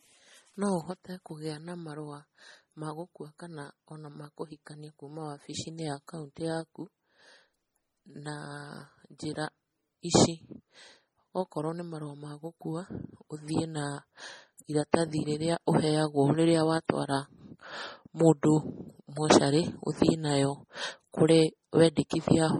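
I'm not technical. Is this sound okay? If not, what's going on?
No, not quite. The whole recording sounds dull and a bit swishy, like the crisp top end was shaved off. That's likely low-bitrate audio saved at a high bitrate: it was squeezed hard once, then re-saved as a bigger file, which can't restore what was lost.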